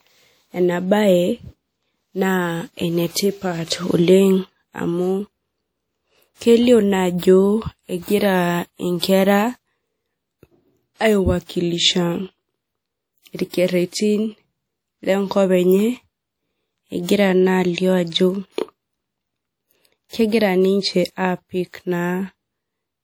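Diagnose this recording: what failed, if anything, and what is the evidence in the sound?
The codec stage failed. Throughout the speech there is a ringing, washy quality and a hiss that rises and falls with the voice. This points to likely WMA compression at a low rate, which fits about 48 kbps. Weak detail is discarded and quantisation noise smears.

Pre-echo appears before sharp attacks, from 13.49 to 13.53 s, 18.53 to 18.58 s and 20.09 to 20.13 s. Each onset is preceded by a brief hiss lasting 41, 55 and 43 ms. The codec spreads noise sized for the loud attack across its whole block, filling the quiet moment beforehand.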